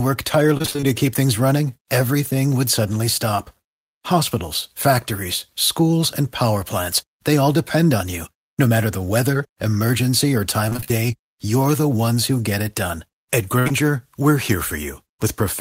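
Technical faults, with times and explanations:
0.57–0.88 s and 10.69–10.92 s: repeated packet loss (robotic sound). The first span has seven gaps before "keep things running everything", the second six between "the weather emergency or" and "you're the ones who", each under 25 ms. Each gap was filled by extending the previous sound, so nearly half of each span is synthetic and comes out choppy.
13.59–13.68 s: burst of packet loss. About 60 ms of audio, just before "we're here", never arrived in time. The receiver stretched the last sound across the hole while fading it, giving a brief held buzz or hiss, then jumped ahead with that piece missing.
13.68–13.72 s: short concealed packet loss. Immediately after the burst, another 20 ms went missing. The decoder continued from the preceding pitch or noise and then blended back into the real audio, heard as a quick smear or wobble on top of the recovering sound.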